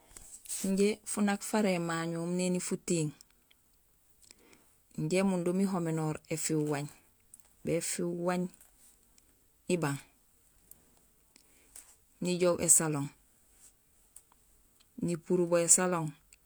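No audible technical faults here.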